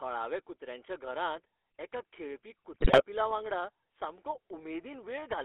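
Speech heard through the GSM full-rate codec throughout. The line is limited to 300 Hz to 3.5 kHz, and the voice sounds buzzy and gravelly, which fits 13 kbps coding. From 2.72 to 3.03 s, GSM bit errors corrupt the decoder's values, so the speech breaks into squawks, pops and gargling, which suggests a bit error rate near 3 percent.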